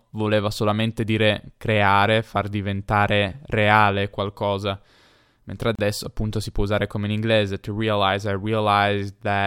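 At 5.75 s there's a gap at a join of encoded pieces: about 33 ms of dropout where separately encoded segments were butted together untrimmed, so the speech cuts out briefly, then resumes.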